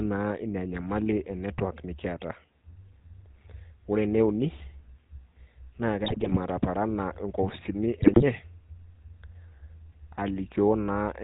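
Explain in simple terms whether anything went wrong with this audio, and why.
Two things went wrong with this speech. The whole clip has passed through the GSM full-rate codec, the original digital mobile-phone coder. It rebuilds the voice from a simple model of the throat and mouth, fed by a coarse pulse train, and drops everything above 4 kHz. The damage is plainly audible: the voice sounds buzzy and gravelly throughout, with a muffled, narrow phone-line quality and no crisp top end.

On top of that, there are two bursts of GSM bit errors. This happens when a weak radio link corrupts the data reaching the decoder, so the values that shape the voice's tone, pitch and loudness come out wrong. From 6.04 to 6.37 s, just before "ataparana inkopisini", the voice breaks into squawks, pops and gargling. A second, shorter burst follows from 7.96 to 8.23 s, right after "ataparana inkopisini".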